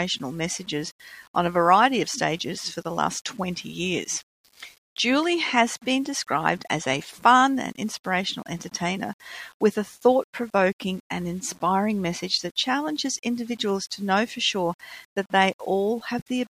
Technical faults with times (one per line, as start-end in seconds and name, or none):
0.00-16.59 low bit depth without dither